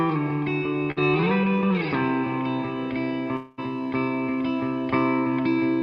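At 0.91 to 0.98 s, a burst of packet loss stretches the last sound into a 49 ms fading fill, then jumps ahead past 40 ms of lost audio. From 3.36 to 3.60 s, a long network dropout is the likely cause: a 213 ms fading continuation, never reaching silence, before audio returns with 220 ms missing.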